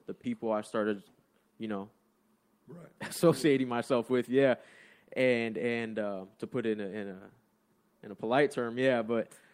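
Clock drift between sender and receiver runs through this speech recording: the sending side's clock is roughly 1.5% slow, so the receiver's jitter buffer keeps draining and has to be topped up with material it fills in itself, leaving small, unevenly spaced timing hiccups. A short stall from a late packet appears at 0.21 to 0.25 s, just before "I started". A packet arrived about 20 ms late, so the receiver held the last sound for 20 ms and then carried on with nothing lost, giving a brief smeared hold. Repeated timing corrections follow from 1.56 to 9.12 s, after "I started". The receiver keeps repeating short slices to stay in step, playing back at about 98% pace and adding around 150 ms overall.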